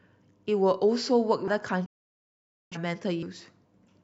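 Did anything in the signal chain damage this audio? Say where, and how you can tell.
Yes. At 1.48 s and 3.23 s the sound skips, dropping about a third of a second each time with a hard join. That's audio missing between chunks, likely from the recorder losing audio at buffer changeovers.

From 1.86 to 2.77 s the sound fades out in about 3 ms and stays silent for roughly 850 ms. That's a digital broadcast dropout: the receiver muted while frames failed, which fits around twenty lost frames.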